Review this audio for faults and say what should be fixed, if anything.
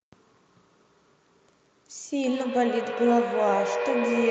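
A feedback howl begins at 2.15 s and runs to the end: a tone near 500 Hz swells, pulsing roughly every 150 ms, peaking about 4 dB below the speech. Unlike echo, whose repeats fade, each trip round this microphone-to-loudspeaker loop grows louder and narrower. Muting one of the devices sharing the room, or switching to headphones, would break the loop.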